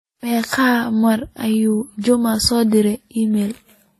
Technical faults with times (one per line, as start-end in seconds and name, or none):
0.00-4.00 transcoding between lossy codecs